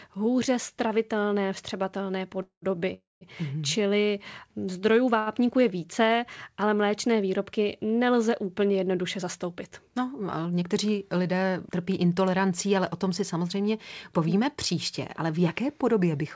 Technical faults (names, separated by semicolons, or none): call audio freeze; short stall from a late packet; jitter buffer speed-up